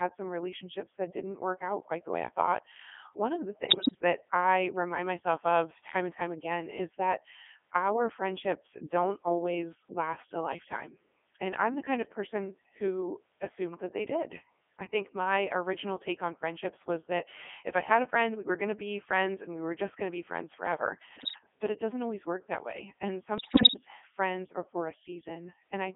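The whole clip is speech passed through the Codec 2 vocoder. The sound is heavily damaged. It fits the 3.2 kbit/s mode. Only pitch, voicing, level and a coarse spectral shape are sent. The decoder rebuilds the voice from sine waves, so the original waveform is gone. The result is robotic and buzzy. The band runs from about 250 Hz to 3.4 kHz, which makes it thin and boxy.

Bit errors on digital voice radio hit three times. The first runs from 3.66 to 4.02 s, after "thought one of the" and before "I remind myself of". The second runs from 21.16 to 21.38 s, after "to be friends forever" and before "but it doesn't always". The third runs from 23.38 to 23.81 s, just before "friends are for a". Each burst sounds like roughly one bit in ten going wrong. Each flipped bit corrupts the pitch, level or spectrum of a whole frame. The voice lurches in pitch and loudness and turns into warbling, bleeping gibberish.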